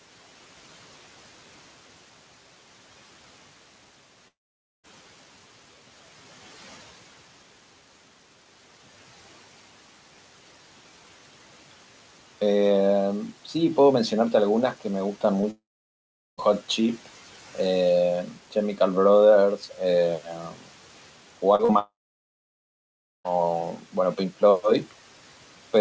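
At 4.28 s the sound stops abruptly, leaving a brief fading buzz and then near-silence until 4.85 s. Speech resumes mid-stream, with roughly half a second missing rather than delayed. That is the signature of a long network dropout, most likely a stall in packet arrival. The receiver extends the last sound briefly, then gives up, and the lost stretch is never played.

At 15.41 s there is a quick smear, about 30 ms long. This is short concealed packet loss: a packet arrives too late to decode, so the receiver patches the gap by continuing the preceding sound and blending back into the real signal. Almost immediately, from 15.51 to 16.39 s, a second long network dropout leaves close to 0.9 s of fade and then silence. Throughout the clip, G.722 cuts off everything above 8 kHz, and low room noise sits about 22 dB below the speech.

Between 20.26 and 20.67 s, parts of the speech sound swallowed and faint, dipping by up to about 12 dB over roughly a fifth of a second in total. 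This is speech cut by the noise suppressor: it treats soft speech energy as background and pulls it down along with the noise.

Two more wobbly patches of short concealed packet loss follow at 21.55–21.61 s and 21.65–21.71 s, with about 34 ms and 40 ms of invented continuation. They lead straight into the longest long network dropout, from 21.79 to 23.34 s, where about 1.5 s goes missing behind a short fading tail and silence before the audio resumes.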